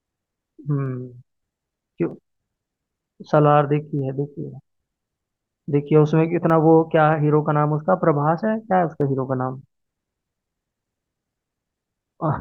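From 0.23 s to 12.15 s there's a click roughly every 0.63 s, about twenty in all, over the speech. Those are clock drift buffer slips, likely two clocks disagreeing by around 300 ppm, so a handful of samples get dropped or repeated each time.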